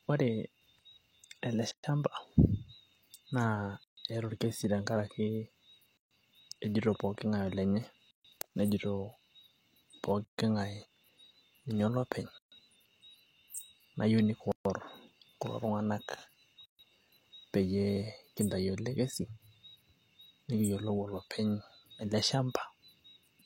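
Speech with a gap at a join of encoded pieces, repeating at 1.71, 3.84, 5.97, 8.11, 10.25, 12.38, 14.52 and 16.65 s. Each gap runs 123 to 136 ms with smeared edges, where separately encoded 2 s segments were concatenated without trimming encoder delay and end padding.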